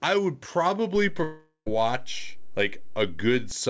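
A DC step at 0.96 s shifts the waveform's zero line in this speech recording, giving a low thump; the offset lasts until 3.51 s. A long network dropout from 1.24 to 1.68 s likely cost about 0.42 s of audio; the gap is filled by a fading continuation of the last sound, then roughly 0.1 s of silence before sound resumes. The G.722 call path leaves nothing above 8 kHz.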